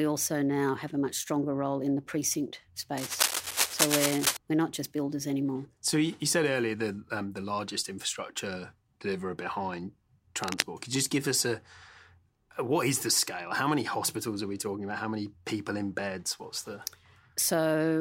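Cable scratch noise at 2.97–4.37 s, after "role in the precinct", and at 10.44–10.64 s, after "largest infrastructure deliverer behind": dense, ragged bursts of rustling, roughly as loud as the speech itself, likely from a worn cable or connector whose contact resistance fluctuated as it moved.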